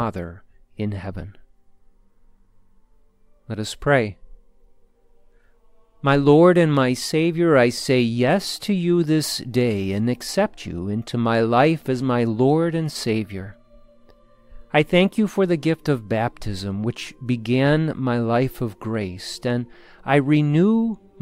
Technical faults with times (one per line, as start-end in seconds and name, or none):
none